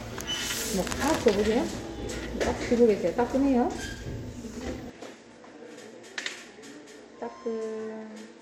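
A recording of sounds that, from 4.90 s on, loses everything above 13 kHz, drops roughly 5 dB and picks up faint new background noise, likely an input switched to a poorer device.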